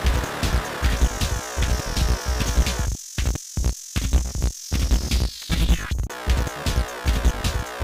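Nothing stood out on listening; no technical faults could be heard anywhere in the audio.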